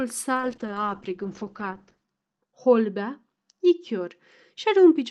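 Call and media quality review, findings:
Speech turns rough and watery from 0.34 s onward, with the top end dulled and no recovery before the clip ends at about 5 s. This is a call bitrate drop in the sender's Opus encoder: a falling bandwidth estimate cut the rate from 32 to 8 kbps, held at the floor for 1.7 s. Coarser coding adds the watery roughness, and the audio bandwidth narrowing from 12 kHz to 8 kHz removes the upper band.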